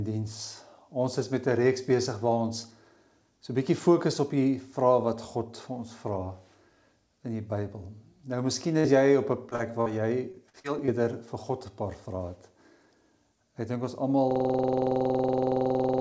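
Starting at 8.80 s, with further instances at 9.50, 9.55 and 9.81 s, the call suffers short concealed packet loss. About 20 to 40 ms of audio fails to arrive each time, and the receiver extends the preceding sound to cover the hole, leaving brief smears or wobbles.

From 10.32 to 10.90 s, repeated packet loss produces a robotic sound. Four gaps, the longest 45 ms, fall close together, so about a fifth of the span is patched rather than received. The sound turns choppy, with fragments missing.

At 14.31 s a system hang loop sets in and lasts to the end. The machine stalls while the audio hardware keeps replaying one 46.4 ms piece of its ring buffer, which fits a 2048-sample buffer. That repetition at about 21.5 Hz is heard as a machine-gun stutter, band-limited to 8 kHz by the call codec.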